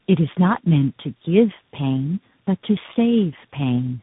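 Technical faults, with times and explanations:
Throughout: tandem speech coding. The speech carries the compounded damage of several speech coders in a row. There is a rough, noisy texture, a muffled quality with nothing above about 3.8 kHz, and a warbly instability. Each coder re-encodes the errors of the one before, so the artefacts pile up rather than average out. The sound fits three codecs in series, likely AMR-NB, then G.729A, then a CVSD stage.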